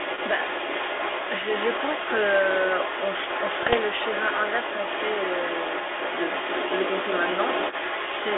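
Other side's voice leaking through runs the entire length of this speech recording: a second talker sits only about 5 dB below the main one, likely because the echo canceller left the loudspeaker signal in the microphone. Bit errors on an ADPCM link hit from 3.63 to 3.75 s, as pops and a rough burst with level jumps; each flipped bit knocks the decoder's step size and prediction off, so the damage rings on briefly, consistent with a handful of corrupted frames at a low error rate.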